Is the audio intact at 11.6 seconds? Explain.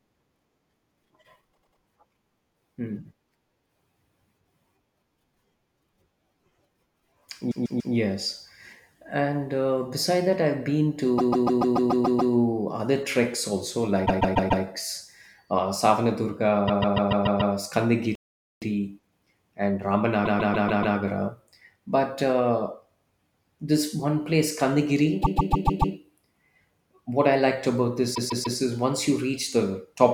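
No. Repeated frames span 11.17 to 12.33 s: a 144 ms block, consistent with about six compressed frames, replays eight extra times, producing a stutter and adding 1.15 s.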